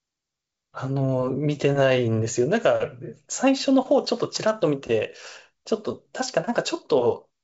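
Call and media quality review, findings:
No faults found; speech carried over G.722 wideband telephone coding at 64 kbit/s, content stopping at about 7 kHz as that path gives, with coding texture faint at most.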